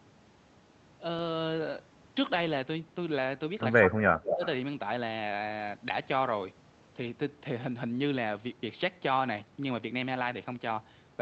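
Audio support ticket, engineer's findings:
Speech suppressed in double talk, 3.89–4.42 s: speech dips by up to about 20 dB for roughly half a second while far end talks. Likely cause: echo canceller unable to separate near talker from loudspeaker echo, attenuating both.

Echo leak, 4.28–4.47 s: delayed copy of speech audible, 213 ms behind original, about 5 dB below speech level. Probable component: loudspeaker device whose canceller left residual echo, returned through the Opus call path.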